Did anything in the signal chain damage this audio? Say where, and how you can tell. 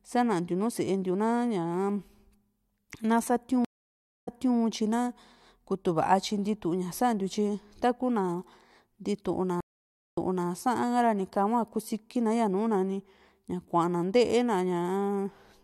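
Yes. Two stream reconnects damaged the audio at the network stage, at 3.65–4.57 s and 9.60–10.48 s. Each drops to silence (0.62 s, then 0.56 s), then the speech resumes about 0.3 s earlier, repeating material as the server resends a burst to a freshly started decoder.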